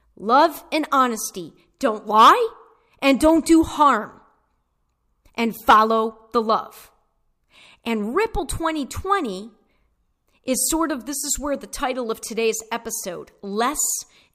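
No technical faults can be heard anywhere in the recording.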